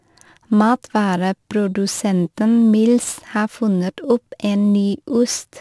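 Aliasing runs throughout: the speech fits a drop to a 24 kHz rate without filtering, folding highs about 25 dB down back below 12 kHz. Sibilants sound gritty, and a spectrogram shows energy pressed hard against 12 kHz.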